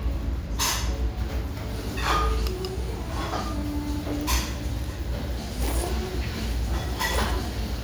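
No technical faults can be heard anywhere in these sounds. Nothing interrupts or disturbs the audio at any point along its course.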